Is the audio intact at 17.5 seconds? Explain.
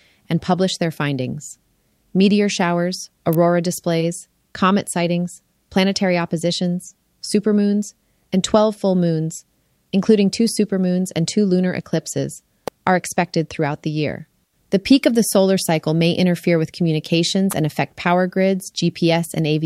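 No. An electrical switching spike hits at 17.51 s, between "may interfere with communications" and "and affect power". It is likely a nearby switch, motor or static discharge arcing into the audio line, heard as a sharp snap peaking around -10 dBFS over the speech.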